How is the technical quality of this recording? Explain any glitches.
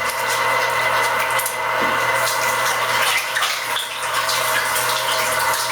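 The technical quality is poor because of one fault that runs through the whole recording.

Gain pumping is present from start to finish. The input gain is likely set far too high, with a fast limiter or compressor clamping each loud sound. The level ducks by around 10 dB under every loud event, leaving the sound squashed and breathing.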